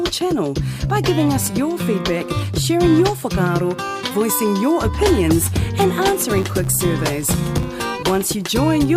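From 6.35 s to 8.23 s a filter restarts on every block: it discards its internal state at each block boundary and begins processing as if the input before it had been silent. Each restart leaves a small transient at the start of the block, and these recur 100 times a second, which fits blocks of 10 ms. The result is a buzz at 100 Hz laid over the sound, rising and falling with its level.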